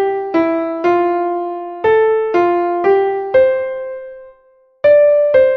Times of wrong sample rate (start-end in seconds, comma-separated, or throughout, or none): none